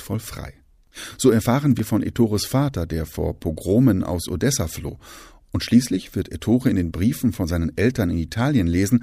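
At 1.79 s the speech jumps, as though a sliver of sound were snipped out and the two edges butted together; a second, smaller skip follows at 4.89 s. Neither has any gap of silence. The likely cause is a dropped buffer (overrun), where the recording side fell behind and incoming audio overwrote unread samples, losing roughly 10 ms at the first point and only a few milliseconds at the second.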